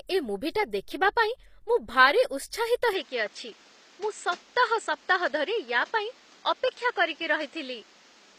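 From the start, the speech carries plainly audible codec damage, with nothing above 15.5 kHz. The sound is likely from HE-AAC compression at a low rate near 24 kbps. Spectral band replication rebuilds the treble from copied lower bands, so its harmonics misalign and sibilants sound gritty, metallic or lispy.

At 2.93 s the band abruptly narrows to 8.2 kHz and stays there to the end, with no gap and the level roughly unchanged. A new noise floor roughly 30 dB below the speech appears. The input was likely switched to a poorer device, and the speech turns dull or boxy.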